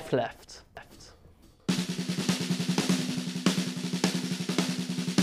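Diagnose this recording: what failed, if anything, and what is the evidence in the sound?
A doubled audio track runs from 0.77 s to 3.15 s. A full-band copy trails about half a second behind, around 5 dB quieter. It has no decay or room colour and cuts in and out abruptly. Likely a second, slower capture path or a misaligned edit.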